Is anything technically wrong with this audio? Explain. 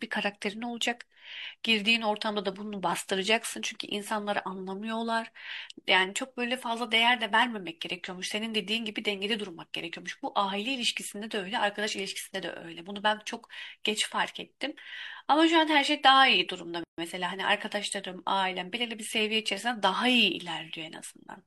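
Yes. At 16.84–16.98 s the speech drops into a 144 ms gap at a join of encoded pieces: encoder delay and end padding left untrimmed, giving a silence with smeared edges.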